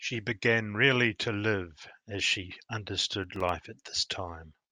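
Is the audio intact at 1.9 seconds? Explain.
Yes, at 1.9 seconds the speech plays through intact, with no dropout, click, distortion or other audible fault at that moment.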